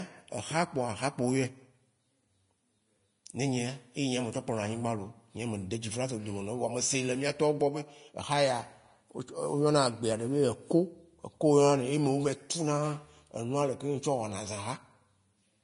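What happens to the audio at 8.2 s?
The speech at 8.2 s sounds hissy and grainy, with a rough edge on the treble and softened consonant attacks. Nothing is heard above about 10.6 kHz. This lasts the whole clip, not just this moment. The likely cause is Vorbis compression at a low setting, consistent with a rate around 33 kbps. The encoder lowers its cut-off and quantises the upper residue so coarsely that fine detail turns into noise of similar energy, which produces the grain.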